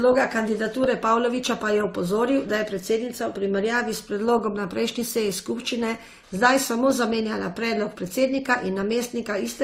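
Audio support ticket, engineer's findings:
Transcoding between lossy codecs, throughout: speech likely passed through an AAC-type encode and then an Opus-type re-encode at a lower rate. The second stage spends bits on the first stage's artefacts and adds its own. Heard as two coding textures together, with nothing above 19.6 kHz.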